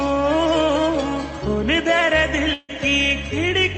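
From 2.53 to 2.71 s the sound breaks up in a way that points to a long network dropout as the likely cause. For roughly 150 ms the receiver fills the gap by extending the last sound as a decaying buzz, then falls to near silence for about 20 ms before the audio resumes. About 160 ms of material never arrives, so the sound picks up further along. The audio carries the coding noise of the call path and has no content above 8 kHz, consistent with an Opus stream.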